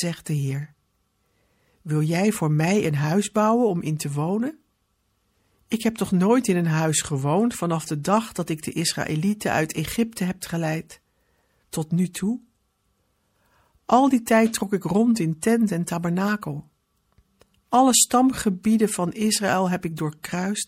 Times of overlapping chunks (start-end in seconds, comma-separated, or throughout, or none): none